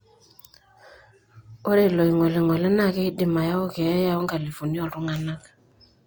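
Throughout the speech, two distinct sets of coding artefacts are heard together, pointing to transcoding between lossy codecs, likely a low-bitrate HE-AAC stage followed by Opus. The second encoder re-codes the first one's artefacts and adds its own; nothing remains above 20.2 kHz.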